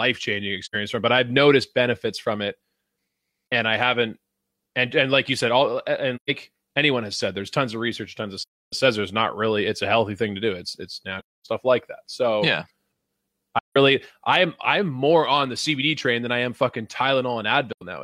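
AAC frame loss with muting leaves soft-edged silent gaps at 0.65, 6.16, 8.42, 11.19, 13.59 and 17.72 s and a brief dip at 3.51 s, each roughly 40 to 300 ms long. The decoder zeroed the missing frames' spectra, so overlapping windows fade the speech out and back in. Spectrograms show full-band blank columns, and waveforms show tapered holes.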